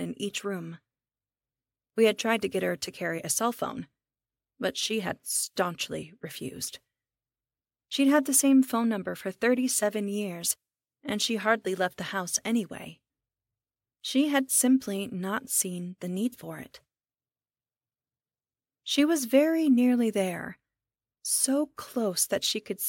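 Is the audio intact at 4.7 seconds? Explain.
No. At 4.7 s the speech carries regular ticks ten times a second, from 0.0 to 14.9 s, because the resampler restarted on every 100 ms block, likely a 48 kHz to 44.1 kHz conversion, leaving errors at each block edge.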